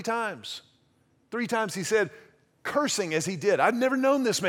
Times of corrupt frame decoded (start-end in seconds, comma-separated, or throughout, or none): none